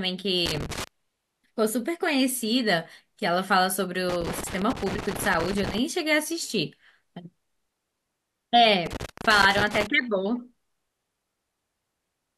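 Loose connector crackle scratches through at 0.46 to 0.87 s, 4.09 to 5.78 s and 8.86 to 9.87 s: a dirty contact chopping the speech into irregular bursts.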